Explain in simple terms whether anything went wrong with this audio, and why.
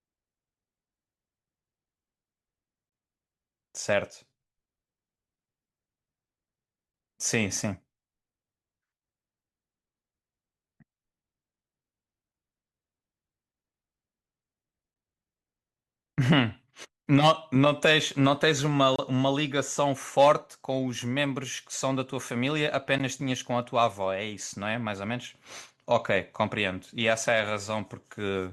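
The speech cuts to brief, hard-edged silence at 2.89–2.92 s, 6.92–6.94 s, 18.96–18.99 s and 22.99 s. This is a gap between stream segments: the 4-second chunks don't butt together, so the player fills each small hole with silence. Nothing is lost.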